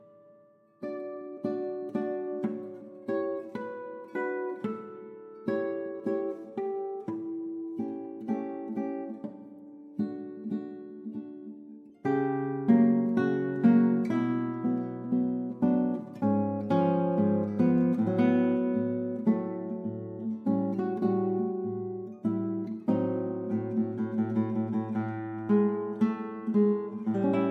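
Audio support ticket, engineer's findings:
Nothing stood out on listening; no symptom to log against any component.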